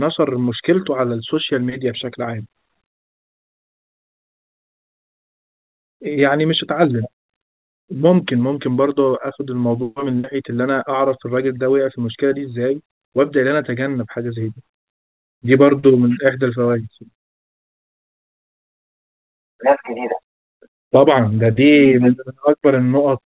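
Speech over a WebRTC call path with nothing above 4 kHz, consistent with G.711 mu-law at 64 kbps; no faults found.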